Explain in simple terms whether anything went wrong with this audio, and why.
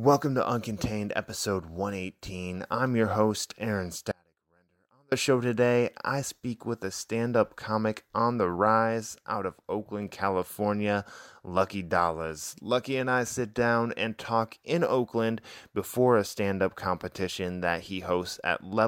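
Something does go wrong. From 4.12 to 5.12 seconds the speech suddenly drops away for about a second, leaving only a very faint sound far underneath, and then snaps back just before "show today I speak". This is an audio dropout to a faint residue. The signal was likely lost somewhere along the way while the rest of the chain kept running, so a faint sound still comes through. A natural pause or a fade would ease in and out, but this cut is abrupt at both ends.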